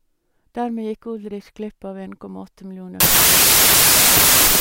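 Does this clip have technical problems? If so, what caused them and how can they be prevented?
Yes. From 3.00 s to the end, the speech collapses into loud noise with the original buried inside. This is a wrong sample width fault. Packed 24-bit samples are read as 16-bit, so most values mix bytes. Playback runs at about 0.667 times speed, lower in pitch. Matching the reader's sample format to the writer's prevents it.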